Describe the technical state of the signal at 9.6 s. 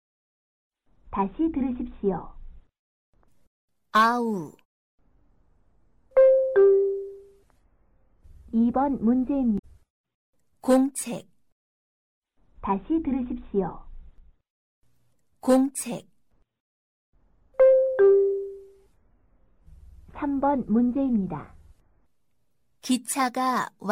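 A short glitch cuts through the audio from about 9.55 s to 9.64 s, lasting roughly a tenth of a second. It comes from damaged data in the compressed stream: some of the encoded bytes at that point are corrupt, so the decoder misreads the affected frames, loses its place in the bitstream and has to hunt for the next valid frame header before it can resume clean playback.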